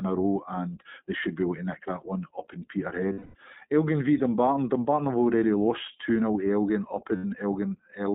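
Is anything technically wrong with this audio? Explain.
Yes. The whole clip is speech through the iLBC codec, band-limited to roughly 150 Hz to 3.7 kHz, with a plainly rough, synthetic edge that fits its 15.2 kbps, 20 ms frame mode.

There are also lost iLBC frames at 3.12 to 3.35 s and 7.16 to 7.25 s. The decoder repeats the last pitch cycle with noise, so each gap becomes a held, buzzy vowel before clean recovery.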